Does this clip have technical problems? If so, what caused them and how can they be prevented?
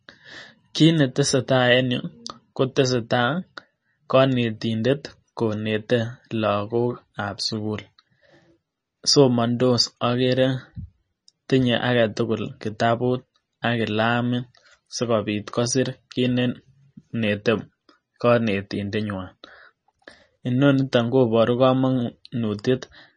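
Yes. Throughout the speech the sound is watery and swirly, s sounds carry metallic chirps, and nothing is heard above 9.8 kHz. The likely cause is MP3 compression at a starved bitrate, which fits about 32 kbps. The encoder cuts the treble off and discards weak frequency detail that flickers in and out between frames. Encoding at 128 kbps or higher, or keeping a lossless master, prevents it.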